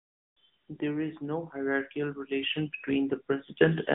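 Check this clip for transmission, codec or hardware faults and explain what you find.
One codec fault runs through the whole clip: AMR narrowband mobile codec damage. It is plainly audible from start to end. The speech sits in a band of roughly 150 Hz to 3.7 kHz, with nothing above. The codec samples at 8 kHz and rebuilds each 20 ms frame from a vocal-tract model driven by sparse pulses. The result sounds thin, boxy, buzzy and synthetic. The quality points to a mid-rate mode, around 10.2 kbps.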